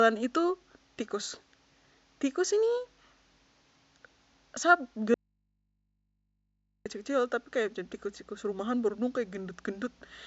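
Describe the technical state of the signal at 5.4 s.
At 5.4 s you're right in the middle of an audio dropout to a faint residue, running from about 5.14 s to 6.86 s, so roughly 1.7 s of speech just isn't there. It cuts off abruptly mid-flow, and what's left is a low mains hum sitting something like 50 dB under the normal level. That points to the source likely dropping out upstream while everything after the break stayed live and picked up the open input.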